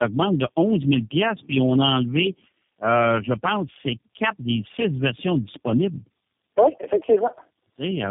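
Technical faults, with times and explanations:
throughout tandem speech coding: three low-rate speech coders in a row, fitting a G.729A, AMR-NB, G.729A chain, compound each other's errors into rough, warbly, muffled speech with nothing above 3.5 kHz.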